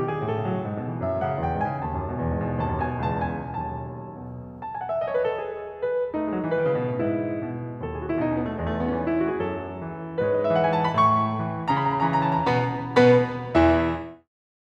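No faults found in this music; the level eases down from roughly 13.5 s to its end at 14.29 s as an editor's fade-out, with no click or hard edge at the tail.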